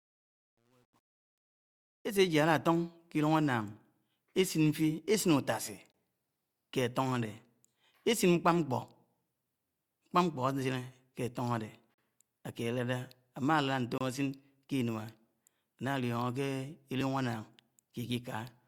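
Over the opening fade-in, from 0 to 2.22 s, the speech sounds gritty and grainy, worst from 0 to 1.75 s, clearing just before "átọn ké llúng". This is truncation distortion on a fade: the fade was computed at about 10 bits without dither, so the quiet waveform collapses into coarse steps. At 5.21 s a tiny click-like buzz appears, a repeated buffer where a roughly 1.3 ms block played two extra times because fresh audio was late, which fits a 64-sample buffer. At 5.92 s a hard-edged hole of about 22 ms cuts the sound, a gap between stream segments where mismatched timestamps left silence at a 2-second segment boundary. The same happens at 11.94 s (about 39 ms) and 13.98 s (about 26 ms). At 17.01 s another short click comes from a repeated buffer, this time replayed once.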